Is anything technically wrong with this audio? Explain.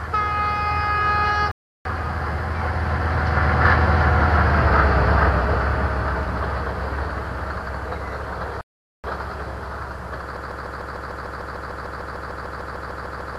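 Yes. There are two playback stalls and a broken-record loop. At 1.51 to 1.85 s and 8.61 to 9.04 s, the sound drops out for 0.34 s and 0.43 s. The player likely ran short of data. From 10.37 s to the end, a 0.15 s fragment repeats about twenty times, back to back. This is a broken-record loop, likely from a stalled stream resending its last buffer.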